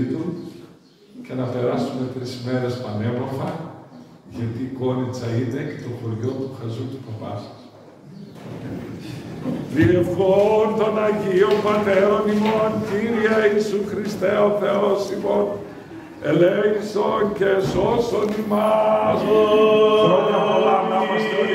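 At 18.29 to 18.31 s a single loud pop stands a few dB above the sound, likely a voltage spike from a switch or static, while the audio continues underneath.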